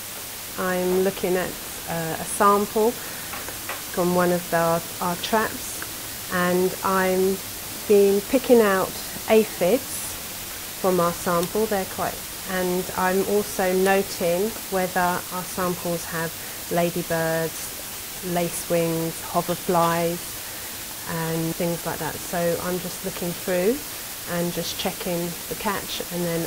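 A constant, even hiss runs through the whole clip. It sits only about 10 dB below the audio itself, so it is always plainly present. This is low bit depth with dither. The audio was reduced to just 5 bits. Random dither noise was added before the rounding step. That turns the coarse rounding error into steady white noise instead of distortion. So the hiss stays even and never grinds or breaks up with the signal.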